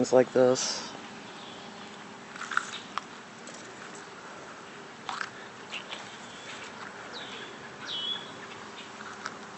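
Nothing in the audio stood out as a technical problem on listening.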